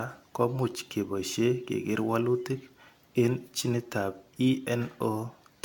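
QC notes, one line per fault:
Throughout, generation loss: swirly, hollow speech, blurred onsets, nothing above 17 kHz, more smeared than one AAC pass explains, likely around seven re-encodes.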